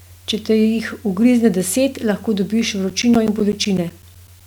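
Right after "ugrizne deset lahko dobiš", from about 2.90 s to 4.41 s, the speech picks up periodic USB or driver dropouts. Every 0.125 s something stalls the bus or driver, and roughly 10 ms of audio is lost and replaced with silence, around fifteen gaps in all. You hear it as a steady ticking stitched through the voice, eight clicks a second, sounding wherever there's signal.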